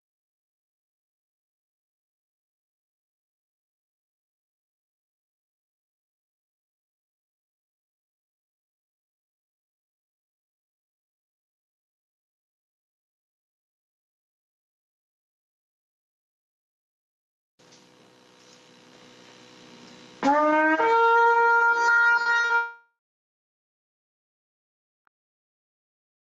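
Around 22.21 to 22.27 s, then 22.41 to 22.45 s and straight on to 22.51 s, short concealed packet loss occurs: 40, 20 and 40 ms of audio arrived too late, so the receiver extended the preceding sound and blended back, heard as brief smears and wobbles.

From 22.55 s to 25.09 s comes a long network dropout, likely from the connection stalling. About 2.5 s never arrives. The concealment stretches the last sound into a fading buzz, then roughly 2.1 s of silence follows before audio resumes, through a call codec whose top end stops near 12 kHz, with the gap simply missing.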